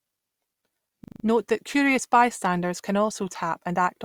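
At 1.04 s the speech locks into a system hang loop that runs until 1.24 s: a single 40 ms slice of audio repeats five times back to back. What's happening is the machine or driver stalling while the sound hardware keeps replaying the same stretch of its ring buffer, which points to a buffer about 40 ms long. At a 25 Hz repeat rate it comes across as a brief, rapid stutter. Once playback resumes, essentially no audio seems to be missing.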